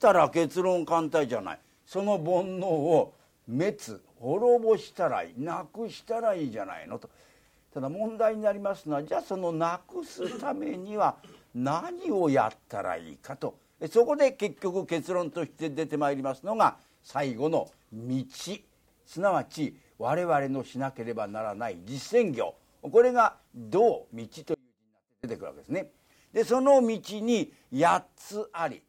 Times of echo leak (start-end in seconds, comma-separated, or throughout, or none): none